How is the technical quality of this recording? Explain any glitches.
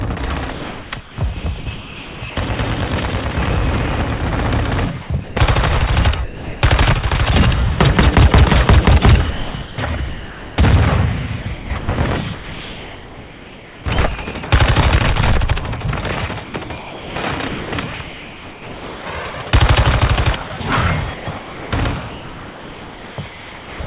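The recording has repeated gating faults, heard through a narrowband call path with nothing above 4 kHz, which fits G.711 coding.

Sound chopped by the voice detector occurs at 0.26–2.36 s, 5.02–5.36 s, 9.3–10.58 s, 11.42–13.86 s, 16.44–19.46 s, 20.48–20.6 s and 21.14–23.8 s. This is likely the sender's detector repeatedly switching transmission off and on. Quieter portions are swapped for comfort noise, up to about 2 seconds within a stretch, so the sound turns choppy.

Sound dropped by the voice detector occurs at 6.24–6.62 s. This is likely the detector mistaking quiet sound for background and halting transmission. About 0.34 s of real sound disappears, replaced by steady synthetic noise until sending resumes.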